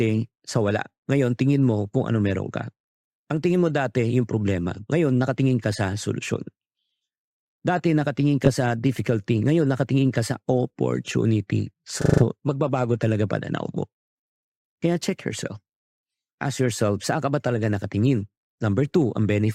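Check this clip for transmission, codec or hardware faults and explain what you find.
There are two spots of repeated frames in this speech. At 8.45–8.49 s a 20 ms chunk plays twice, and at 12.01–12.23 s a 40 ms chunk loops five extra times. That's compressed data sent again, heard as a stutter, adding about 220 ms.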